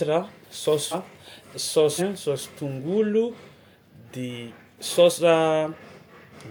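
At 0.91 s and again at 2.0 s, compressed frames are skipped. Whole frames of roughly 46 ms never reach the output. The speech jumps ahead about half a second, then about 0.7 s.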